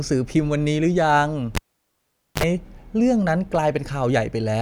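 At 1.55 s the speech is cut by a cable pulled and plugged in while live: a sharp pop, then about 834 ms of near silence as the signal path is broken. Just before it returns, a 55 ms burst of 50 Hz mains buzz appears while only the plug tip makes contact, and a second pop at 2.44 s restores the sound. On a waveform this shows as two spikes around a flat gap; a spectrogram adds stacked harmonic lines from the hum.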